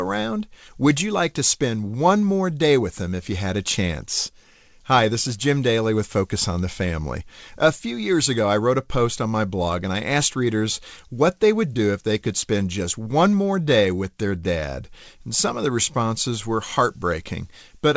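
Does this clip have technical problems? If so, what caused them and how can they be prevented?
No, nothing in this speech clip stood out as a technical problem on listening, so there is nothing here that needs preventing.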